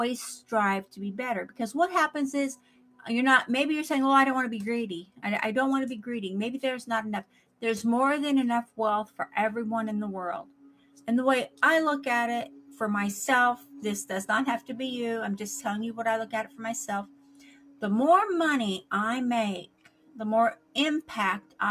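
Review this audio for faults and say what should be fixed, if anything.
A speech-oriented noise suppressor has been left running across the whole clip, and it is treating sustained, non-speech material as noise. Its gain rises and falls by something like 10 dB as it decides what to keep, so held sounds and decaying tails are pulled down while sharper onsets pass. The result is an audible pumping and thinning of the sound from start to finish, rather than a steady level. To prevent it, bypass or disable speech noise suppression on any channel carrying music or ambient sound.

Sound cut by the noise suppressor occurs at 0.41–1.59 s, 2.56–3.0 s, 5.06–5.24 s, 7.24–7.62 s, 8.65–9.19 s, 10.44–14.7 s, 16.47–17.82 s and 19.67–21.59 s. In each stretch the suppressor classifies the sustained or fading part as noise and drops it by up to about 12 dB. Most spans lose only a few hundred milliseconds in total, while the longer ones, especially 10.44–14.7 s, lose a second or more. 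To prevent it, disable the suppressor or reduce its attenuation depth for non-speech content.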